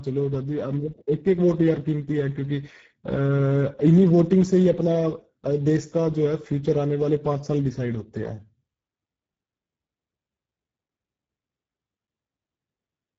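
From start to finish, the speech carries Speex codec damage, and it is plainly audible. Speex is a CELP coder that models the voice and spends few bits on the excitation. The sound points to a bitrate near 10 kbps. At that rate the voice turns rough and hoarse, with a noisy grain. The top band sounds like a shaped hiss, not real detail.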